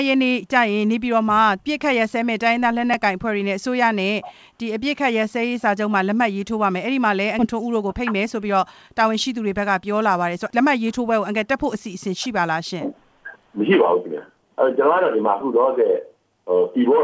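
At 2.94 s a repeated buffer causes a brief click-like buzz. New audio arrived late, so the device replayed its last buffer twice more, and a block of about 5 ms sounds three times in a row. On the waveform this shows as an identical short cycle repeating with hard joins. On the spectrogram a thin vertical smear marks the joins. The same fault recurs at 15.41 s with the same three-fold 5 ms repeat.

At 7.39 s the audio makes a skip ahead. Roughly 0.7 s of material is dropped, probably discarded while later audio was already queued, and playback jumps forward with no gap. The waveform shows an abrupt splice between unrelated shapes. In the spectrogram the harmonic and energy patterns break sharply at one vertical line, against the 8 kHz ceiling set by the G.722 call codec.

From 7.53 s to 9.38 s a jitter buffer speed-up follows, as the receiver works off the extra delay. It runs at about 106% speed and trims around 100 ms in total by cutting many tiny pitch-period slices. 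The pitch stays the same, but the sound feels slightly hurried. On a spectrogram the features come a little closer together in time, and each small cut may leave a faint seam.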